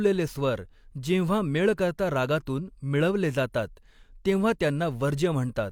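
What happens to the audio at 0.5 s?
Nothing goes wrong at 0.5 s; the speech plays through that moment intact, with no dropout, click, distortion or other fault.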